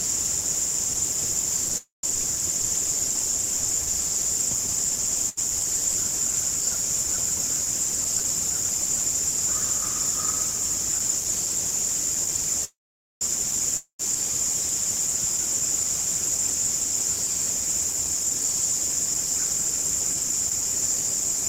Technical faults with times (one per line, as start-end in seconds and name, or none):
1.77-2.05 call audio freeze
5.29-5.39 burst of packet loss
7.50-9.00 chunks out of order
12.64-13.23 call audio freeze
13.77-14.01 long network dropout
15.41-19.40 jitter buffer speed-up
16.50-17.50 chunks out of order